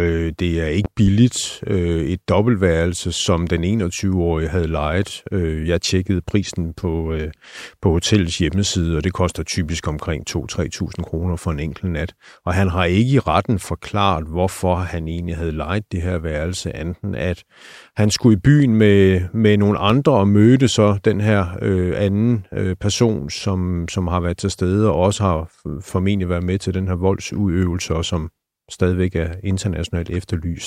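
Two sharp loud pops, in quick succession between 0.85 and 1.10 s, jump well above the speech, roughly 10 dB over it, and a single pop of similar strength follows at 19.90 to 19.93 s. The speech carries on underneath each one. The likely cause is a sudden voltage step or spike, from a plug, switch, static discharge or driver glitch, added to the signal and shaped by the circuitry after it into a brief thump.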